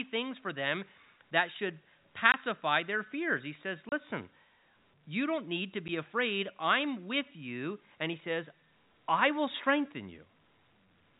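Packets went missing in transit and the receiver played silence in their place, a case of packet loss filled with silence. At 2.32 to 2.34 s, between "for them that should" and "their fears", a 20 ms hole cuts the speech. Another 30 ms gap falls at 3.89 to 3.92 s, and a 10 ms dropout at 5.88 s sits between "you don't need to" and "afraid I'm with you". All three gaps are multiples of 10 ms, which points to 10 ms packets. Each opens and closes abruptly within the narrow telephone-band G.711 sound.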